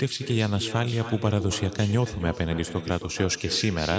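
Speech with an echo with no canceller throughout. Each phrase returns about 12 dB quieter roughly a third of a second later, a delayed round-trip copy rather than room reverberation.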